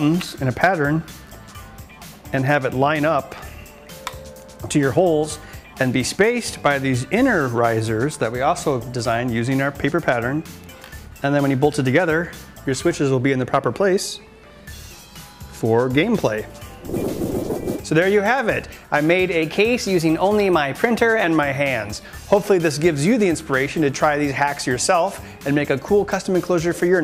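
Drift correction steps at 14.93 to 16.03 s and 19.42 to 21.24 s: the sound first slows by 6% and sags about a semitone, then speeds up 6% and rises a semitone, each snapping back. Likely clock-matching software abruptly changing playback rate to rebalance its buffer.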